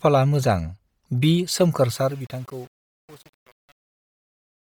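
From the start, the speech has a breathy, grainy edge. The top end sounds filled in with hiss rather than real detail. This is likely Bluetooth LC3 compression, the transform codec of LE Audio. The damage is heavy. The coder works in 10 ms frames and, at a rate that fits about 32 kbps, discards much of the upper spectrum and pads it with noise. The band itself still reaches about 20.2 kHz.

From 1.88 s to the end, the fade-out brings truncation distortion on a fade. The fade runs from 1.88 s down to 4.7 s. But the quieter it gets, the rougher it sounds. The gain stage keeps too few bits, which fits about a 7-bit path, and adds no dither. The low-level waveform collapses into coarse steps. The tail turns gritty.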